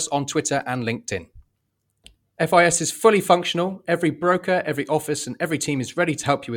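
Listening through the speech, nothing stood out as a technical fault at any point.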